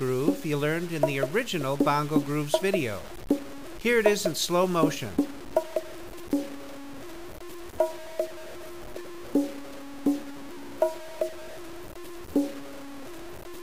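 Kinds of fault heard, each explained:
Low bit depth without dither: A grainy, gritty distortion runs through the whole clip and changes character with the sound itself, rougher on quiet passages, where the faintest parts break up into a sputter or drop away entirely. The error sits only about 20 dB below the signal. The likely cause is samples truncated to very few levels without dither, which fits roughly 6 bits, so the rounding error tracks the waveform instead of forming a steady hiss.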